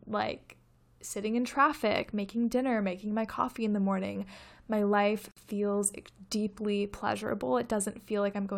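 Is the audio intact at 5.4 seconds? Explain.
No. A gap at a join of encoded pieces runs from 5.31 to 5.37 s. The separately encoded segments keep their padding, so sound drops out for about 51 ms, then resumes.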